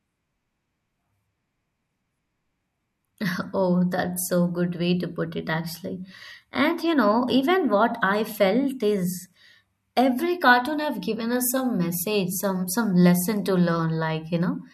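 No technical faults can be heard anywhere in the recording.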